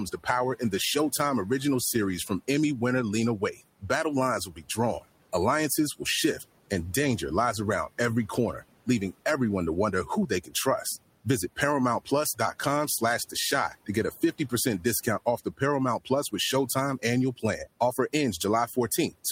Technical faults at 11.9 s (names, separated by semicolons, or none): noise suppressor artifacts; speech cut by the noise suppressor